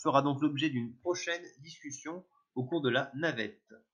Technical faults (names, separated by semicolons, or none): none